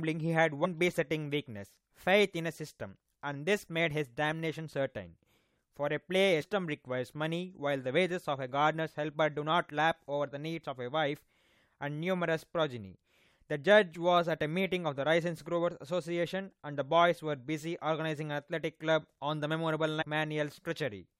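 At 0.64 to 0.66 s, 6.40 to 6.42 s and 20.00 to 20.03 s the speech is broken by brief squawks from damaged data in a compressed stream. In each spot corrupted bytes leave the decoder misreading a frame and hunting for the next valid header, so roughly a couple of hundredths of a second turn into a harsh blip. A spectrogram shows each as a narrow vertical smear of garbled energy, and the waveform shows an abrupt discontinuity.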